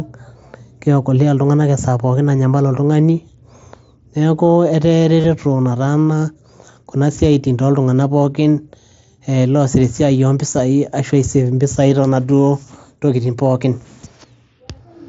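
Concealed Bluetooth headset packet loss occurs at 5.20 to 5.24 s and again at 12.28 s. Voice packets between headset and phone went missing, and the receiver filled each gap by repeating the closest-matching slice of the preceding waveform. The first gap spans 37.5 ms, long enough to be heard as a short buzzy, level-held tone with a slight warble as real sound resumes. The second lasts only 7.5 ms and is nearly hidden.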